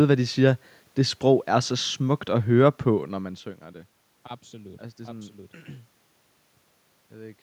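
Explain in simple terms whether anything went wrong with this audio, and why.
Nothing went wrong; the system worked as it should.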